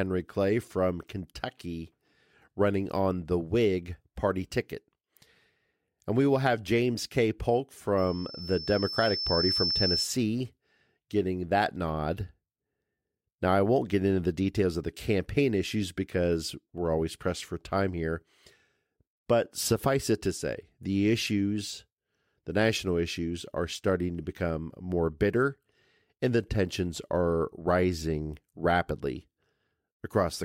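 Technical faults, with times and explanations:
7.97 to 10.14 s: loudspeaker feedback squeal. A pure tone near 5.3 kHz rises out of the speech. It swells over about a second and a half until it is roughly as loud as the voice. The microphone is picking up its own loudspeaker, and that frequency keeps regenerating.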